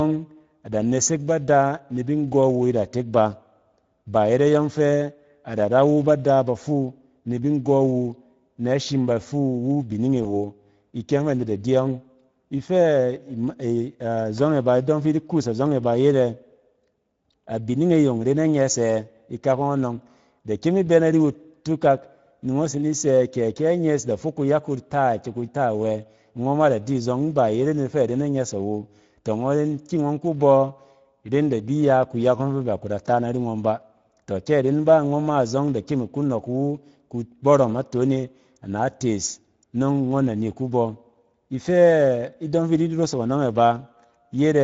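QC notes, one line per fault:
throughout, Speex codec: the encoder has too few bits for the excitation signal, so the speech comes out plainly hoarse and noisy with a grainy edge. This fits Speex running at a middle setting of about 16.8 kbps.
10.23 to 10.26 s, VoIP packet loss concealed by the speech codec: a packet went missing and the decoder filled the gap by extending its last pitch and filter at falling gain. The speech smears briefly into a fading buzz or coloured noise, which fits one lost 20 ms frame.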